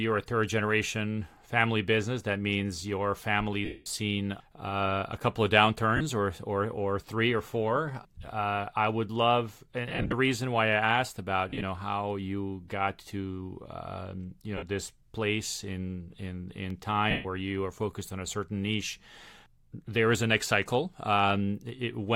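Bluetooth LE Audio frames were lost six times, and the LC3 decoder covered each gap by reusing the last spectrum with random signs, fading it as the loss ran on. This happens at 3.65 s (210 ms), 5.97 s, 9.88 s between "I would love and" and "reason why" (scattered, longest run around 50 ms), 11.49 s, 14.57 s after "um you", and 17.10 s before "you are focused on". The speech briefly becomes a noisy smear, and the longest gap sinks toward silence.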